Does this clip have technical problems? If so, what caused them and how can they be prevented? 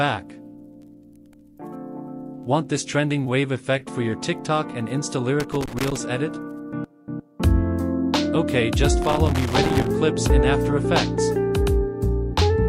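Yes. Loose connector crackle breaks in twice, from 5.40 to 5.98 s and again from 9.02 to 9.90 s. Each burst is irregular and scratchy. A worn or dirty contact is touching and losing contact many times a second as the cable shifts. That chops the audio into fragments. Any DC on the line turns each break into a pop. Clean or replace the connectors, and secure the cables so they cannot move during recording.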